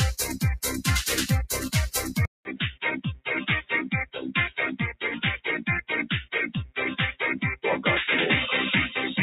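From the start and through the whole clip, a noise suppressor applied to music or sounds is working against the material. Built for speech, it treats sustained tones, ambience and decay as noise, so attacks come through while held sound and tails sag by a few decibels, giving a fluttering, thinning pump. Unlike compressor pumping, the dips follow how steady the sound is rather than how loud it gets.

At 2.25 s the sound cuts out for about 200 ms, then returns duller, boxier and somewhat quieter, with a narrower band and a faint new noise floor sitting far below the signal. This abrupt change in band, tone, level and background points to the input likely having switched to a poorer device. A filter or EQ change would not bring the gap or the different background noise.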